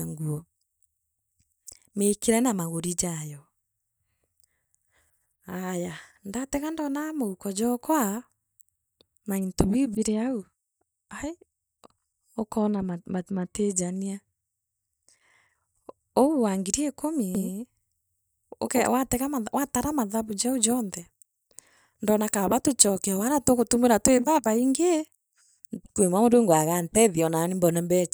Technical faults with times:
17.35-18.87 doubled audio track

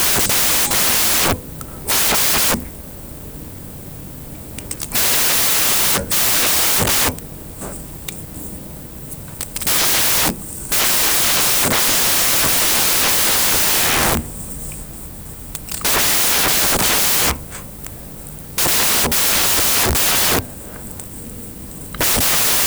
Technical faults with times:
0.00-22.66 samples built from the wrong bytes

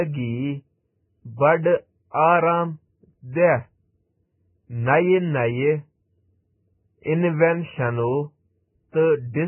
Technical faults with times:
0.00-9.47 Vorbis compression
3.32-3.35 pre-echo
7.03-7.06 pre-echo

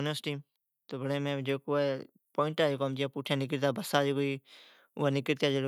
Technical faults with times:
0.23-4.55 automatic gain rising

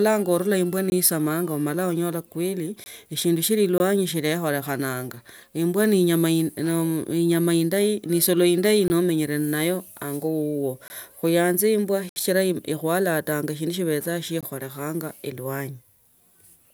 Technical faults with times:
0.90-0.92 block of digital silence
2.84-2.86 block of digital silence
3.78-3.80 block of digital silence
8.88 block of digital silence
10.88 block of digital silence
12.09-12.16 block of digital silence
14.41 block of digital silence

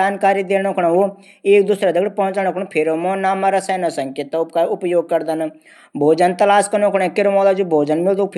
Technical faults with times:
7.38 dropped samples

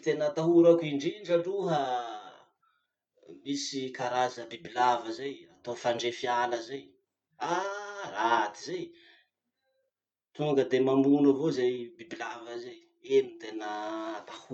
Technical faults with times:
none

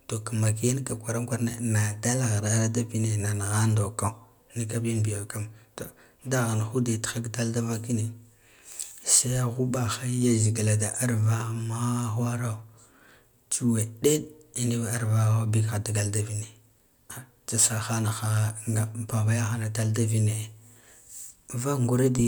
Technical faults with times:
none

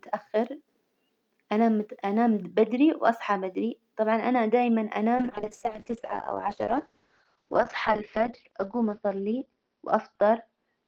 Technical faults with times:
5.16-10.87 call bitrate drop

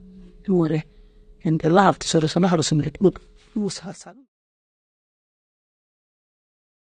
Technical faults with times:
0.00-6.82 AAC compression

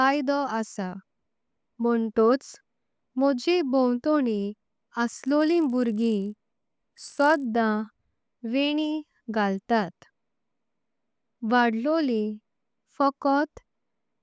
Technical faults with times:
5.16-7.44 resampler restarted on every block

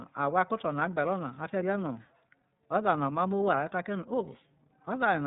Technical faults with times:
0.00-5.26 iLBC codec

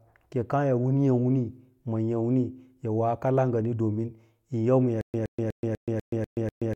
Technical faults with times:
5.01-6.75 stutter with silent gaps

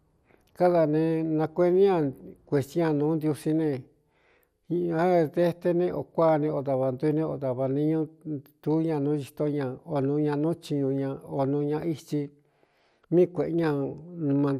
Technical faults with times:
0.00-14.60 MP2 compression

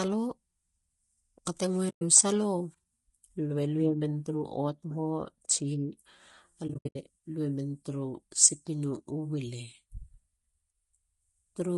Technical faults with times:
0.00-11.78 low-delay AAC compression
1.89-2.02 AAC frame loss with muting
6.67-6.96 AAC frame loss with muting

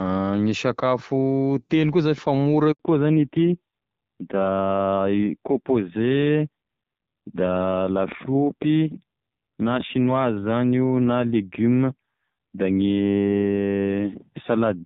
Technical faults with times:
2.71-2.79 handover gap
2.79-14.86 fallback to narrowband

